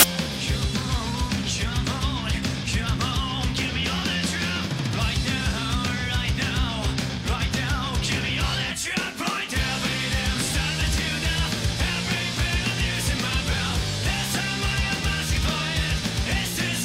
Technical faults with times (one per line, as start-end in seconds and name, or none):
0.00-0.03 file tags played as audio